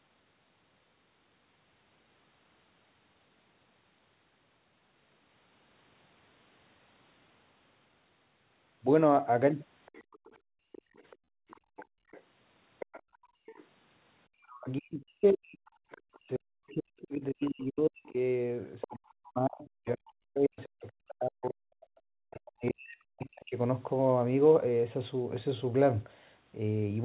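The echo canceller likely failed to fully remove the far end's loudspeaker playback, so other side's voice leaks through from 9.86 to 13.65 s. It is a faint second voice roughly 25 dB under the speech, within the telephone band that ends at 4 kHz.

Within that stretch, the canceller clamps the microphone hard, gating the background from 10.09 to 12.11 s and again from 13.02 to 13.46 s. The room sound drops out by about 40 dB, then about 37 dB, and snaps back when it releases.

From 14.3 to 23.54 s, both sides likely talk at once and the canceller cannot separate the talker from the echo. The result is speech suppressed in double talk: the voice dips by as much as 40 dB or chops out, for about seven seconds in total. Leakage recurs inside this span at 15.66 to 16.19 s, 17.42 to 17.46 s, 18.81 to 18.97 s (loudest, about 15 dB under the speech) and 22.31 to 23.26 s.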